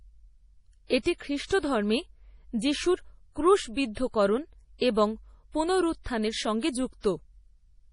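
Speech, likely passed through heavy MP3 compression at a low bitrate around 32 kbps: weak frequency lines drop out, giving a watery texture, with nothing above 10.6 kHz. The codec's block-wide noise spreading causes pre-echo, a brief hiss smearing attacks at 1.45 to 1.51 s (53 ms) and 1.59 to 1.63 s (38 ms).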